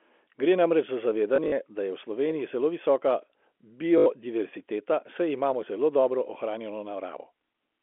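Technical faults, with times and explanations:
1.36–1.52 s, packet loss with last packet repeated: about 80 ms of audio is missing, scattered over 160 ms in runs of up to 40 ms. Each gap is filled by replaying the previous chunk of sound, not by silence, so it stutters rather than drops out. The short repeats buzz at about 50 Hz, which points to 20 ms packets.
3.98–4.06 s, packet loss with last packet repeated: a single unbroken 80 ms loss is filled by looping the last packet, giving one steady robotic buzz at about 50 Hz. Unlike a plain dropout, the sound keeps going.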